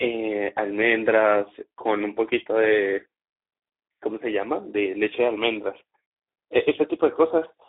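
From start to end the speech carries Speex codec damage, with the sound confined to a telephone-style band of roughly 300 Hz to 3.6 kHz and nothing above 3.8 kHz. The low-rate CELP coding, which fits a setting near 11 kbps, has too few bits for the excitation, so the speech sounds noisy and hoarse. On a spectrogram the energy stops in a hard ceiling near 3.8 kHz and harmonics look smeared and grainy.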